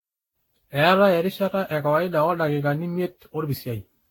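Throughout, the speech sounds swirly, smeared and hollow, with blurred attacks and nothing above 17.3 kHz. This is generation loss, likely from about ten lossy re-encodes.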